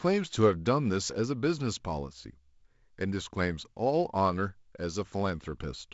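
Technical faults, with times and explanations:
No technical faults are heard, so there are no times or explanations to give.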